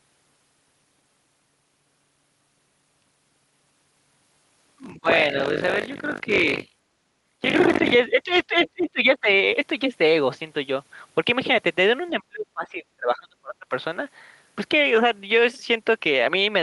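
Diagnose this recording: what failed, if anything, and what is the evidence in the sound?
Speech suppressed in double talk, at the call-processing stage: the speech dips or drops out at 4.79–5.09 s, 8.09–8.3 s, 8.47–8.54 s, 8.73–9.28 s and 12.1–13.72 s, by about 10 to 30 dB. The echo canceller likely misread simultaneous talk as echo and attenuated everything.

The other side's voice leaking through, also in call processing: a brief second voice appears at 8.58–8.7 s, about 20 dB below the speech. This is likely residual loudspeaker echo that the echo canceller did not fully remove from the microphone signal.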